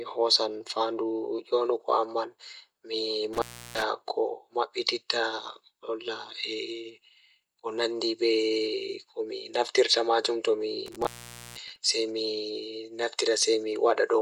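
At 3.33 s and again at 10.86 s, the speech drops out from an intermittent contact, where a loose plug or cable briefly breaks the signal path. The line stays open for about 0.33 s the first time and about 0.49 s the second, with crackle at each break and remake and faint hiss in between. On a waveform, the envelope collapses to a thin noise floor between sharp spikes. On a spectrogram, the speech bands vanish, and broadband vertical streaks mark the edges.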